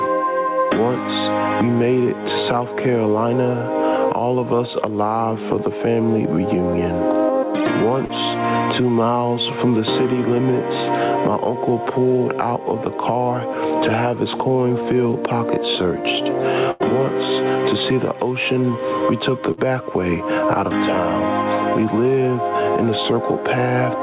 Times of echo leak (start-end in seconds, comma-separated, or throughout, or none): none